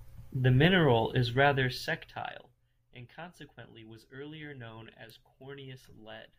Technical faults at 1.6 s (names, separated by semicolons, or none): zipper noise